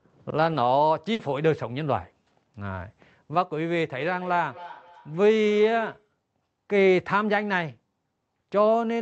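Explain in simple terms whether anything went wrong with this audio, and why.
A burst of packet loss hit at 1.13 s. A short run of data never arrived, so the sound is stretched and fades for 60 ms, then skips ahead.

From 3.95 to 6.09 s there is feedback echo between two devices. Another device in the room replays the call into a microphone, so the sound returns about every third of a second, quieter each time.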